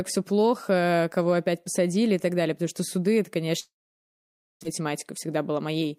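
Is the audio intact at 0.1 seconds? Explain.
Yes, the speech is intact at 0.1 seconds, with no audible fault at that moment.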